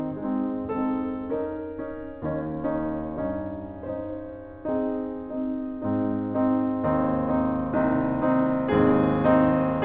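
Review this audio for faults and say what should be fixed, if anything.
Nothing stood out on listening to this music, which comes over a call path that carries nothing above 4 kHz, so there is nothing here to fix.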